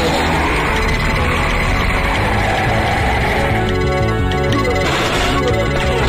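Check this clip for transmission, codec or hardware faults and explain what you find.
There is one hardware fault. From 2.04 to 4.33 s, periodic clock jitter appears. Interference wobbles the converter clock at around 1 kHz, adding sidebands that give a rough, metallic edge.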